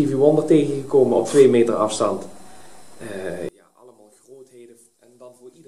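From 3.49 s to the end, one channel was likely inverted, so summing to mono cancels the shared content and the sound drops by about 30 dB.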